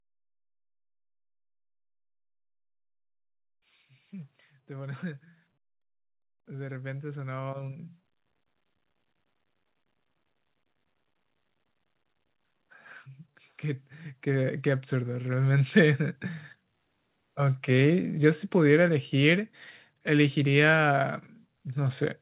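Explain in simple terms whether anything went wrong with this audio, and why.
Automatic gain rising happens twice, from 6.45 to 7.88 s and from 13.61 to 16.03 s. The volume control judged the speech too quiet and gradually turned it up, so the voice and the background noise grow louder together over a second or two. The call line carries nothing above 4 kHz.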